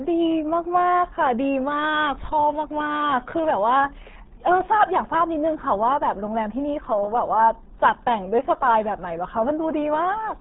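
Speech here, squeezed through the RealAudio 14.4 codec from start to finish. Nothing above about 3.9 kHz survives, and the gargly, muffled texture suggests a starved 8 kbit/s stream.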